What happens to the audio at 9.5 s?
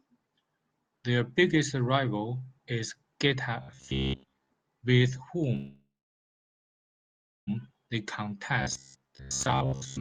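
At 9.5 s the sound has robotic sound from repeated short buffers, from 8.62 s to the end of the clip. New audio likely arrived too seldom, so the playback side kept repeating its last short slice, about 15 ms, while the real audio was skipped, with roughly 70 percent of the stretch made of repeats. That period imposes a fixed 66.8 Hz buzz, turning the speech into a rigid, metallic buzz that only loosely follows the words.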